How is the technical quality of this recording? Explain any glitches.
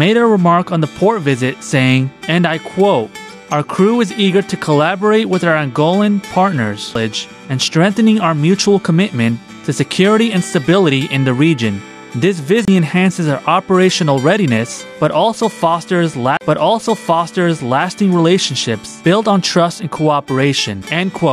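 The recording has three CD skips, so the main issue is playback from a damaged or jolted disc. At 6.95 s there's a tiny tick with a dropout of only a couple of milliseconds. From 12.65 to 12.68 s it mutes for about 30 ms, and from 16.37 to 16.41 s for about 40 ms. Each time, the laser lost its track, the player went silent briefly, and the sound picked up again from a different spot on the spiral. You hear it as a tick followed by an abrupt jump in the audio.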